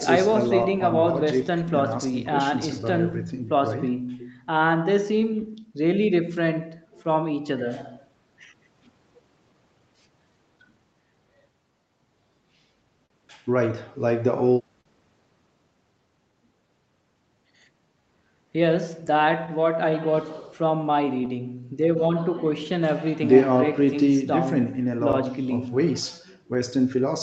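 From start to finish you can hear clock drift between sender and receiver. The sending side seems to run a few percent slow, so the receiver's jitter buffer keeps draining. It has to keep stretching the audio to cover the shortfall, and that gives the whole take a faintly uneven, slightly dragging pace, with small timing hiccups at irregular spots. The high end stops around 8 kHz, which is just what you'd expect from a wideband call codec.

The fix-up work itself shows as repeated timing corrections from 0.30 s to 27.03 s. The receiver plays at about 98% speed and keeps inserting short stretches, adding roughly 0.7 s over the run. Each edit is tiny and all of them push the same way, spaced unevenly. You mostly notice a slightly sluggish, wobbly tempo in the speech rather than any single glitch.

Between 0.32 s and 5.24 s there are scattered short gaps, about four of them. Each is a very small hole, around 10 ms at most, where a packet went missing or arrived late. 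The receiver papered over each one by carrying the last sound forward. Nothing is lost, but you might catch a faint tick or smear here and there.

At 13.06 to 13.12 s and again at 14.81 to 14.87 s there's a short stall from a late packet. The buffer ran dry, so the receiver held the previous sound for 41 ms the first time and 44 ms the second, then picked up where it left off. Each one comes across as a sound hanging on a touch too long, with a slight buzzy or dipped quality.

From 25.12 to 26.57 s there are more scattered short gaps, about three small concealed holes of roughly 10 ms each. As earlier, the last sound gets extended over each one, leaving little ticks or brief smears rather than anything obviously missing.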